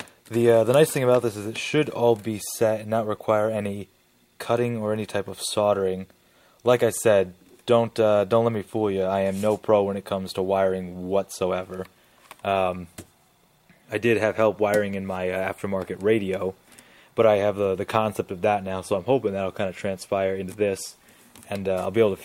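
From 6.71 s to 8.59 s the audio shows sample clock jitter. The converter's timing wanders by something under a microsecond, so each sample lands slightly off its proper instant. Because the resulting error scales with how fast the waveform is changing, it appears as a fine hiss and roughness riding on the louder, brighter parts of the sound, sitting roughly 45 dB below the signal and dropping away where the level falls.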